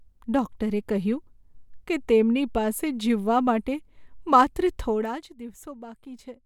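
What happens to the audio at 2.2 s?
Nothing goes wrong at 2.2 s: the speech carries on intact, with no dropout, click or distortion at that point, and the level holds steady there rather than being pulled down or up.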